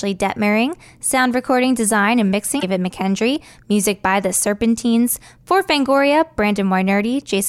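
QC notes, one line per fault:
2.58 to 2.63 s, damaged data in a compressed stream: right after "sound recording design and", the speech breaks up briefly for about 50 ms. Corrupted bytes made the decoder misread those frames. It lost sync and hunted for the next valid frame header.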